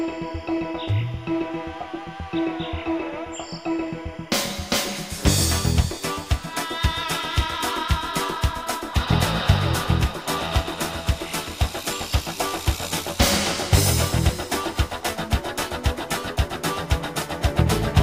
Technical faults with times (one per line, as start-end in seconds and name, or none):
0.00-18.03 timecode bleed